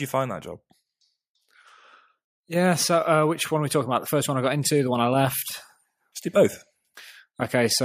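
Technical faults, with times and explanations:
0.52–2.19 s, drift correction step: the speech runs about 6% slow and drops about 110 cents, just over a semitone, then snaps back to normal speed and pitch. This is likely a clock-matching resampler stepping its rate to refill its buffer.
2.46–5.41 s, automatic gain rising: speech and background swell together by about 6 dB over roughly three seconds. An automatic gain control judged the input too quiet and ramped its gain up gradually, lifting the noise floor along with the speech.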